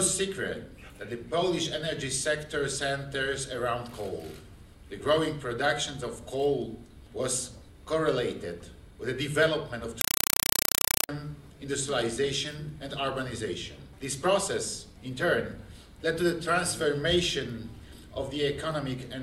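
From 10.01 s to 11.09 s the sound is replaced by harsh, very loud chattering static, which is a compressed stream being played as audio. The digital link is passing raw encoded frames that nothing decodes, so they're treated as ordinary samples. Each frame comes out as a 4 ms burst of noise followed by silent padding, repeating 31.25 times a second. That rhythm points to an undecoded AC-3 stream, probably around 192 kbps.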